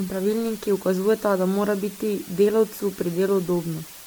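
Speech runs through the whole clip with two faults present from start to finish. First, the signal has been reduced to low bit depth with dither, just 6 bits, with dither noise added before each sample was rounded. Because the dither decorrelates the rounding error from the signal, the error turns into a steady, even hiss sitting only about 20 dB below the speech. It stays constant through pauses and loud passages alike, with no crunchy distortion riding on the voice. Second, the speech shows generation loss. The likely cause is repeated decoding and re-encoding through a lossy codec, consistent with MP3 at around 128 kbit/s applied roughly ten times over. Each pass requantises on a shifted frame grid, so errors stack up. The result sounds swirly and hollow, with smeared consonant onsets, more degraded than a single encode at that rate would be. The spectrum also stops cleanly at about 19.9 kHz.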